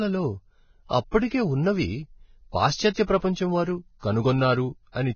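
Speech, likely squeezed through low-bitrate Vorbis compression around 16 kbps, loses everything above 6.6 kHz throughout, and its coarsely quantised treble turns hissy and grainy, roughening tones and blurring attacks.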